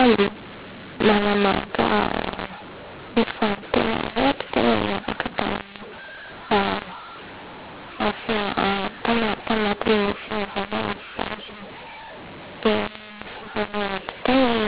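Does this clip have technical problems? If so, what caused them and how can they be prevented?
Yes. Throughout the speech the voice sounds harsh and gritty, with levels scrambled so some come out too loud and others too quiet, and the pauses never go quiet but fill with noise. This is mu-law and A-law mixed up: the audio was encoded as G.711 mu-law but decoded as A-law, so each 8-bit code maps to the wrong level on a mismatched logarithmic curve. The quietest samples get pushed well above silence. The telephone band itself, topping out near 4 kHz, is what G.711 coding produces. To prevent this, carry the G.711 law explicitly in the stream or file metadata and have the decoder use that declared law instead of a default.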